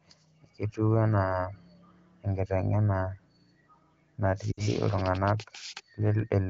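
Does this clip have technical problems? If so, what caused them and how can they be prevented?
Yes, there's one: lost AMR speech frames from about 4.52 to 4.68 s. The wideband decoder had nothing valid to play, so it kept repeating its last good pitch and vocal tract settings while ramping the gain down. You hear the sound drop to near silence within about two frames of a gap of roughly 60 ms, which fits three 20 ms frames, then come back a touch weak. To prevent it, improve radio coverage or enable stronger error protection and jitter handling on the link.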